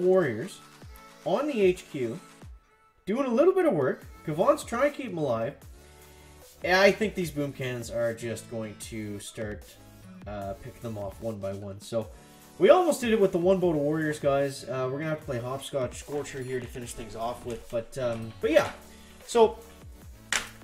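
No technical faults are audible.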